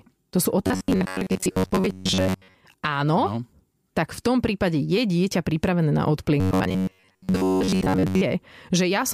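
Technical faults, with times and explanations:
0.67–2.55 s and 6.40–8.23 s (the second just after "je dieťa pripravené na"), robotic sound from repeated short buffers: the speech becomes a rigid, metallic buzz that still loosely tracks the words, pitched at 93.8 Hz. The likely cause is audio arriving too seldom, so a slice of about 10.7 ms is replayed over and over while most of the real signal is skipped. A spectrogram shows evenly spaced horizontal lines at multiples of 93.8 Hz. The waveform shows nearly identical cycles repeating every 10.7 ms.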